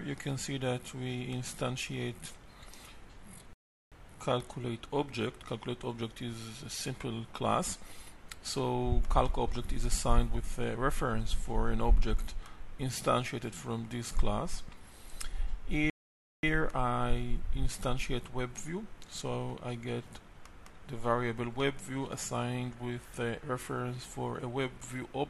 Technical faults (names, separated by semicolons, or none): rebuffering stall